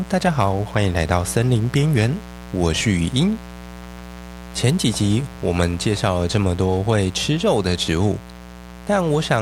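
From start to finish the speech sits over a mains buzz at 60 Hz, a raspy, steady drone only about 15 dB below the speech. Sharp switching spikes, two per mains cycle, leaked into the signal. On a spectrogram it appears as evenly stacked horizontal lines every 60 Hz reaching several kHz, and in silent stretches the waveform shows spiky pulses repeating 120 times a second.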